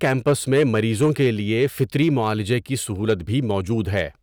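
From start to finish, the louder moments of the speech carry a brittle crackle, a brief gritty edge on the strongest syllables rather than a constant fuzz. This is hard clipping. The level was driven about 4 dB past what the signal chain could pass, so the highest peaks, roughly one and a half percent of samples, were sliced flat. Those squared-off tops add high harmonics, heard as that sharp breakup on each peak.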